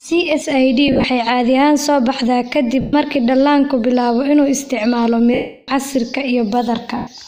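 Lost LE Audio frames occur four times: the radio link dropped packets and the LC3 decoder papered over each gap by repeating the last good spectrum with scrambled phase, then fading it. From 0.88 to 1.04 s, about 110 ms of loss is scattered in short bursts, the longest around 40 ms. Full gaps follow at 2.81 to 2.93 s (120 ms), 5.34 to 5.68 s (340 ms), and 6.97 to 7.07 s (100 ms). The speech smears into a hissy, noisy blur, and the longest gap sags toward silence before sound returns.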